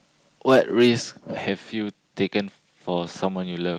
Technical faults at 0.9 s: microphone overload

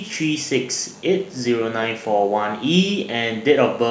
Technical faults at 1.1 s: DECT cordless phone buzz

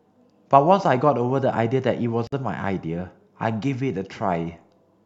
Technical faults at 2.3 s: gap at a join of encoded pieces

